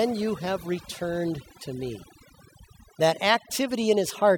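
From start to finish there's overdone noise removal. The denoiser was pushed too hard, so any frequency band sitting close to its noise estimate gets pulled way down or switched off, and the quieter bits of the voice get caught along with the noise. You can hear it in the gaps, where the background drops and breaks up into little twinkling specks.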